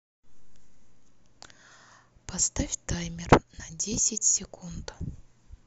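Dropped samples at 1.43 s and 3.94 s in this speech clip: each is a single sharp click, a thin vertical line across the spectrum, likely from well under a millisecond of audio going missing so the waveform jumps abruptly to a later value.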